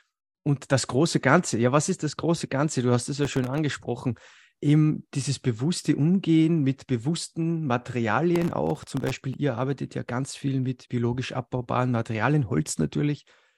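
Processor overload crackle hits at 3.23–3.58 s, after "hast es", and at 8.36–9.34 s, before "ihr arbeitet ja ganz". Dozens of tiny buffers, each under a millisecond, miss their deadline and drop to silence. Their hard-edged gaps make a gritty tearing crackle.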